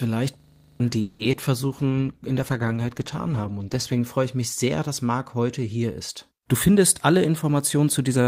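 From 0.40 to 0.80 s there is a system hang loop. The playback system stalled while the sound hardware kept replaying the same 40 ms stretch of its buffer, ten times over. The result is a rigid, mechanical rattle repeating 25 times per second instead of moving sound. The buffer contents never change during the stall, so roughly 0.4 s of the real audio is lost and replaced by the loop.

From 1.01 to 1.21 s comes a call audio freeze. The last sound is held and stretched into a fading buzz for about 0.18 s, with no silence and nothing dropped. When normal sound returns it picks up exactly where it stopped. This is likely packets held up in transit, leaving the jitter buffer empty. The receiver covered the wait and then resumed, so the audio arrives 0.18 s later than before.

Between 1.31 and 1.37 s there is a short concealed packet loss. About 20 ms of the signal never reached the decoder in time, and the receiver filled the hole by extending the preceding sound before blending back into the real signal. 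It comes across as a brief smear or wobble. The patch adds a few milliseconds of timing slip.

From 1.69 to 4.06 s a call bitrate drop sets in. The encoder was pushed onto far fewer bits, and the sound fits a fall from about 32 kbps to about 14 kbps, held at the low point for roughly 2.3 s. With coarser coding the speech turns rough and watery, losing clarity and crispness until the rate climbs back near 4.06 s.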